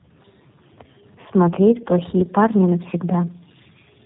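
Throughout, the speech is rough, muffled and warbly with nothing above 3.8 kHz, which points to tandem speech coding: two low-rate codecs, iLBC then G.729A, the second recoding the first's degraded output.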